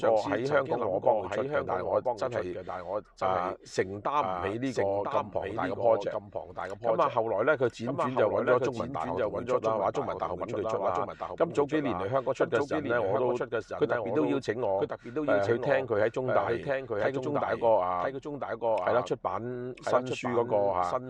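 A doubled audio track runs throughout. A full-band copy trails about a second behind, roughly 5 dB quieter, with no decay. Likely a second, slower capture path.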